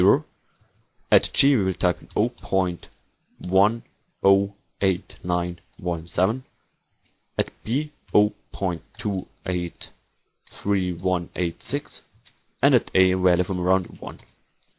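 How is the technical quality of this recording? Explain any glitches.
Nothing in the recording stands out as a technical glitch, so there's nothing here that needs explaining.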